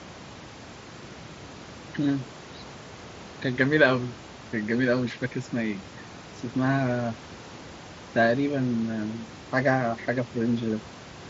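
No technical faults occur anywhere in this speech clip.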